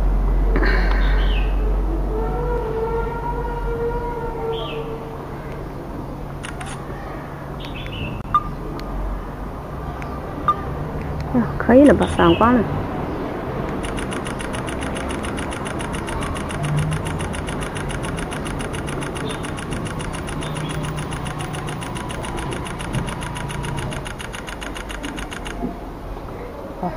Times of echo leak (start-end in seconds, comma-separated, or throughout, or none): none